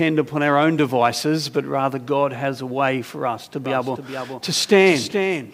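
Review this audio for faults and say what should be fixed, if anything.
A doubled audio track starts abruptly at 3.65 s and runs to the end: a dry copy trails by roughly 0.4 s, about 5 dB quieter, likely from a second, slower capture path. Route the source through a single capture path and check edits for overlapping copies.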